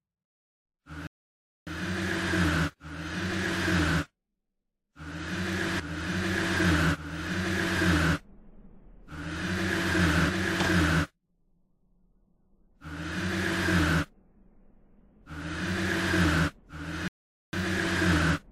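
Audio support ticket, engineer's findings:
Playback stall, 1.07–1.67 s: player likely starved of data or its output thread blocked, so nothing reached the device. Output drops to silence for about 0.6 s mid-flow, then recovers.

Playback stall, 17.08–17.53 s: likely same mechanism near the end of the clip. Output cuts out for about 0.45 s, then resumes.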